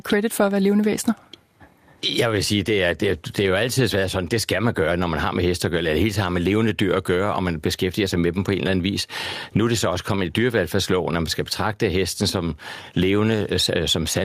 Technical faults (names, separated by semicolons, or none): gain pumping